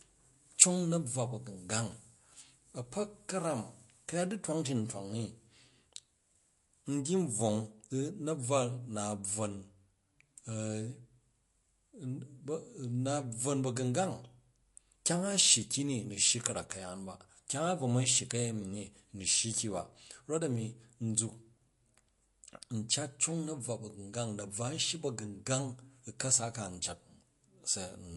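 From start to finish the speech is band-limited, with nothing above 11.3 kHz, and the damage is plainly audible: a watery, swirling texture, metallic chirps on s sounds, and smeared consonant attacks. The likely cause is MP3 compression at a low bitrate, around 48 kbps. Short of bits, the encoder cuts the treble at a fixed point and drops weak frequency lines, which flicker on and off from frame to frame and produce the swirl.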